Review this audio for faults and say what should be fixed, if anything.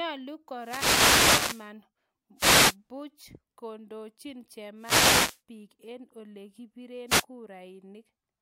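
Wireless microphone noise hits occur at 0.57 to 1.72 s, 2.36 to 2.76 s, 4.77 to 5.41 s (just before "biik eng") and 7.07 to 7.25 s: the FM radio link fades as reflected signals cancel, so receiver noise surges into static swishes over the speech. Fix with diversity receivers, better antenna placement and line of sight, or a clear frequency.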